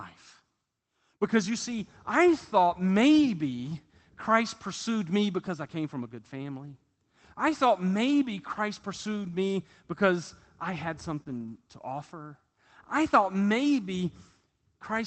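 Lost packets rebuilt from error correction occur at 1.71 to 1.73 s, 2.87 to 2.89 s and 9.23 to 9.33 s. Each time, audio failed to arrive, but the following packet carried a low-bitrate backup copy, and the Opus decoder played that instead. There is no dropout. The first two spans are single 20 ms frames and the third runs about 60 ms. They come through briefly grainier and noisier than the surrounding speech.

Short concealed packet loss follows at 11.23 to 11.28 s, where about 20 ms never reached the decoder and no backup copy covered it. The receiver invented roughly 22 ms of fill by extending the preceding sound, periodically if voiced and as shaped noise if not, then crossfaded into real audio. It is heard as a quick smear or wobble.

At 11.28 to 11.54 s, lost packets were again rebuilt from error correction. This longer 140 ms stretch of backup copies gives a sustained rough, noisy patch immediately after the concealed gap. 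Throughout, the call codec's band limit sits near 8 kHz, which fits wideband Opus at around 24 kbps.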